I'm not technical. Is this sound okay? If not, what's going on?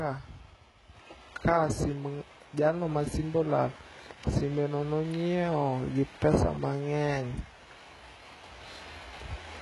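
No. Throughout, the speech has a gritty, metallic treble, with s sounds turning lispy and nothing above about 11.4 kHz. This is likely heavy HE-AAC compression: the upper range is rebuilt by copying lower sounds upward instead of keeping the original detail.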